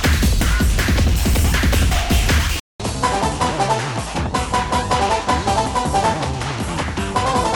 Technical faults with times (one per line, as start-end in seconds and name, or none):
2.60-7.56 input switched to a poorer device